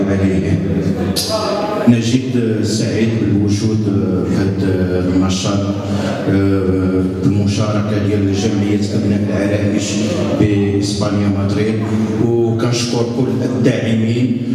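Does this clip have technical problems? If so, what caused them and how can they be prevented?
No, nothing audible in the recording points to a capture, processing or transmission fault, so there is no cause to trace and no preventive step to recommend.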